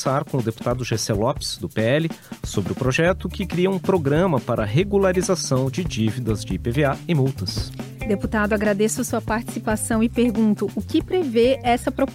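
Nothing is technically wrong with this clip.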